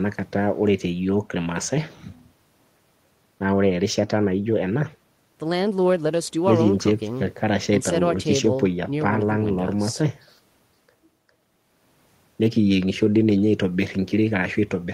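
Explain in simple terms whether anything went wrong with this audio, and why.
Nothing went wrong: the speech carries no audible technical fault at any point in the recording.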